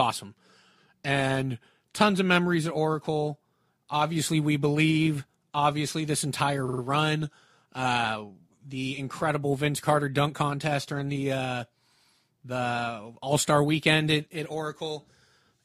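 From 6.67 to 6.81 s, repeated frames cause a stutter. A 46.4 ms block, consistent with two compressed frames, plays three extra times, adding 139 ms.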